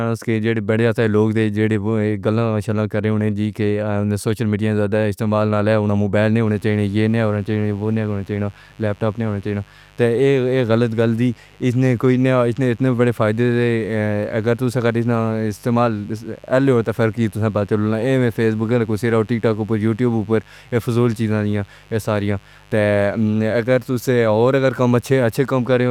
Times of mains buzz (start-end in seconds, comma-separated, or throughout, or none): 6.44-25.91